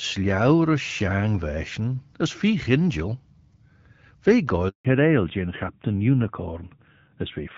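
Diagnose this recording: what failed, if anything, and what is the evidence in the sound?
Handover gap, network stage: the speech cuts out for 160 ms from 4.69 to 4.85 s, as no frames arrived while the call switched links.

Fallback to narrowband, codec stage: from 4.85 s everything above 4 kHz disappears and speech turns duller. This fits a drop from HD Voice at 12.65 kbit/s to narrowband at 7.4 kbit/s.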